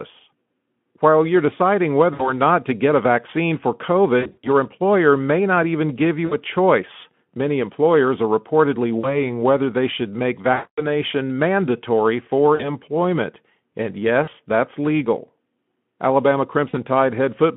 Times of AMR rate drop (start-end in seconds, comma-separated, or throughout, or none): none